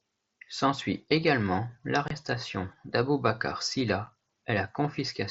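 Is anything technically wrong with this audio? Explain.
Yes. Unconcealed Bluetooth headset packet loss cuts the speech twice: from 2.08 to 2.11 s, a 22.5 ms gap that fits about three lost frames, and at 4.06 s, a 7.5 ms gap. Audio packets between headset and phone went missing, and nothing filled the holes, so each gap starts and stops abruptly. The waveform drops to a flat line with sharp edges. The spectrogram shows thin blank vertical stripes across every band up to the 8 kHz top of the mSBC link.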